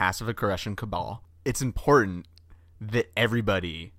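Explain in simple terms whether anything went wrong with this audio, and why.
Nothing went wrong that a listener would notice; the speech in this recording sounds as it should the whole way through, with nothing standing out as a problem.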